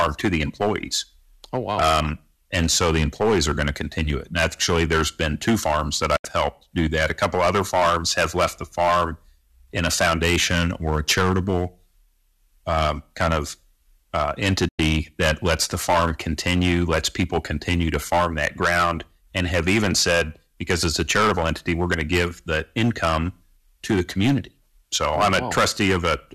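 Speech recording with hard clipping throughout: the level is driven about 15 dB past full scale, so roughly one sample in twenty is cut flat, producing harsh fuzz on every loud syllable. Two digital broadcast dropouts mute the audio after a fast fade of about 8 ms: from 6.16 to 6.25 s, between "been two farms that" and "helped do that", and from 14.68 to 14.79 s, between "um kind of uh" and "that lets the farm". The gaps of about 72 ms and 96 ms fit three and four lost frames.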